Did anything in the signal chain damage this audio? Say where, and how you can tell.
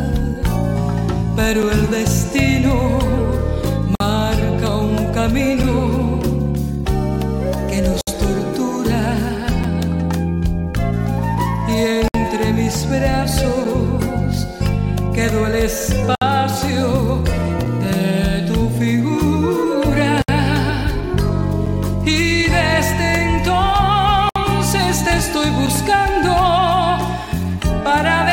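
Yes. At the codec stage, separately encoded pieces were joined untrimmed, keeping each encoder's start delay and end padding. The result is a gap at a join of encoded pieces: silences of 50 to 64 ms at 3.95, 8.01, 12.08, 16.15, 20.22 and 24.29 s, with smeared edges.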